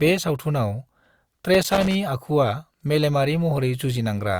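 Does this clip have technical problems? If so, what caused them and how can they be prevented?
Yes. From 1.54 to 1.95 s, just before "आखुआ मेलेमारि", there is loose connector crackle. A worn contact makes and breaks, chopping the speech, which shows as ragged gaps and broadband vertical streaks. Cleaning or replacing the connector and securing the cable prevents it.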